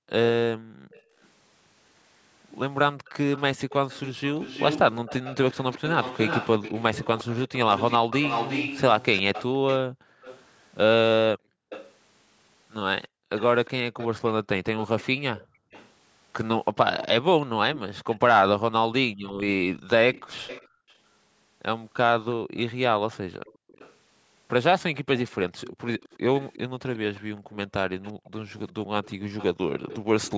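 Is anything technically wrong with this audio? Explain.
Yes. Two faults are audible in this speech clip.

Background gated by the echo canceller: at 0.0–1.16 s, 9.89–13.29 s, 15.45–15.71 s, 19.12–20.89 s and 27.35–28.24 s, the echo canceller decided the far-end loudspeaker was active and clamped the microphone path, cutting it by as much as about 40 dB. Within each window the room tone dips or vanishes for a total of roughly a third of a second to a second, then snaps back when the canceller releases.

Echo leak: the echo canceller on a loudspeaker end likely failed to remove all of its own playback, so a delayed copy of the voice was sent back, trailing the direct speech by 355 ms. At 0.92–1.28 s it is a faint scrap, well below the speech at roughly 30 dB down. From 3.07 s to 30.31 s it is much stronger, at roughly 10 dB below the speech, a persistent ghost of the voice.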